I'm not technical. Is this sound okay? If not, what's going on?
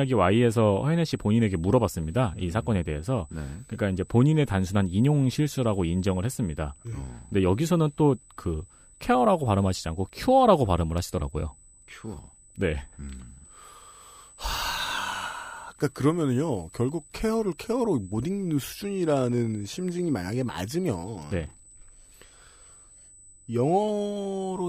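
No. A thin, high-pitched whine runs under the speech from start to finish. This is USB whine: a USB connection draws power in rapid regular bursts that leak into the audio, producing a fixed tone at 8 kHz and, most strongly, 16 kHz, quiet but constant.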